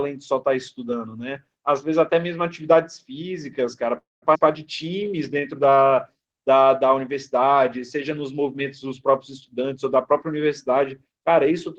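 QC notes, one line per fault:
3.97–4.25 s, call audio freeze: the sound stalls, the last fragment trails off as a brief fading buzz and then about 180 ms of silence, roughly 0.25 s of gap in all. It then resumes exactly where it stopped with nothing lost, likely because packets were held up and the jitter buffer ran dry.
4.34–4.38 s, skip ahead: playback jumps forward with almost no gap, dropping roughly a fifth of a second of audio and butting the two sides together. A stretch was discarded while later packets were already queued, which also cuts back much of the delay added by the freeze.
4.84–6.23 s, jitter buffer slow-down: this passage plays at about 89% speed with unchanged pitch, sounds stretched. The receiver repeated single pitch periods and pause fragments many times in a row, adding 159 ms to rebuild its reserve.
10.13–11.52 s, jitter buffer speed-up: the audio runs at about 107% speed at the same pitch and sounds hurried. 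With more audio buffered than its target, the receiver trimmed short pieces of one or a few pitch periods repeatedly, removing roughly a tenth of a second.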